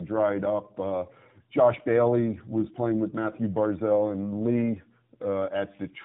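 The speech passed through two low-bitrate speech codecs in a row, with a plain telephone-grade link between them, so the second coder re-encoded the first's already degraded output: tandem speech coding. Throughout, it sounds rough, muffled and warbly, with nothing above 3.8 kHz.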